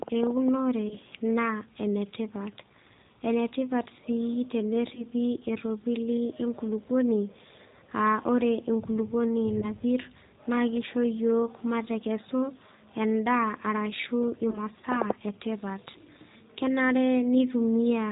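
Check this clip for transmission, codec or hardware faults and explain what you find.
Two faults are present: G.729 codec damage throughout the speech, and four brief concealed packet losses.

The G.729 codec, running here at 8 kbit/s, rebuilds the speech from a vocal tract filter and sparse pulses, so the voice sounds rough and synthetic. A spectrogram shows a hard ceiling at 4 kHz.

VoIP packet loss concealed by the speech codec occurs at 0.89–0.97 s, 4.95–5.05 s (just before "eropili enkulupuoni"), 9.60–9.70 s (just after "ore enkulupuoni") and 14.50–14.58 s. Each gap fits a single lost 20 ms packet. The decoder extends the previous pitch, producing a buzzy tone or coloured noise that fades. On a spectrogram this appears as flat, repeated harmonics, and the waveform shows a sagging envelope.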